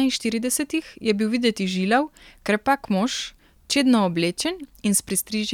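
No technical fault can be heard anywhere in the speech, which stays steady and intact throughout.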